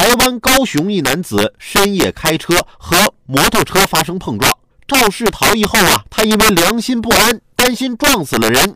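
The level was pushed about 5 dB past full scale, so a small fraction of speech peaks overflow and wrap to the opposite sign, throughout: integer overflow, heard as violent, sharp cracks on loud syllables.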